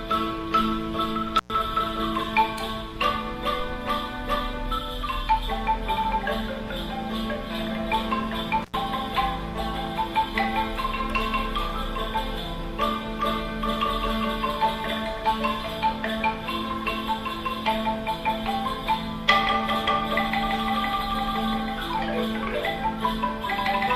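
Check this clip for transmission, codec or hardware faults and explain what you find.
Two brief dropouts are present, both from an intermittent contact. The first runs from 1.38 to 1.50 s, with the signal gone for about 106 ms. The second runs from 8.62 to 8.74 s, open for about 92 ms. A loose plug or cable conductor momentarily loses connection, so the audio path breaks. The sound cuts out abruptly. Crackle marks each edge as the contact opens and recloses. Faint hiss fills the gap.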